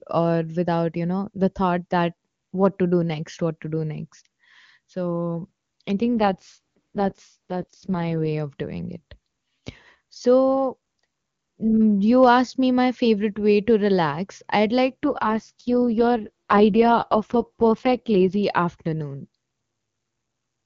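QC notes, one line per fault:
6.20–8.39 s and 15.03–18.43 s, AMR rate drop: after "next so i think" and "to relax i'd like", speech turns raspy and synthetic without gaps or band loss, fitting a fall to AMR-WB's 6.6 kbit/s mode.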